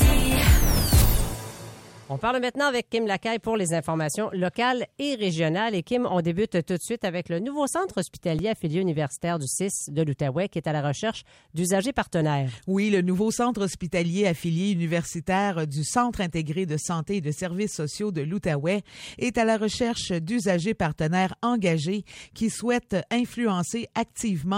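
A repeated buffer fault clicks at 8.39 s and 22.12 s. Fresh audio arrived late, so the device replayed its last 1.33 ms block, twice and then four times, which fits a 64-sample buffer. Each stall costs a few milliseconds.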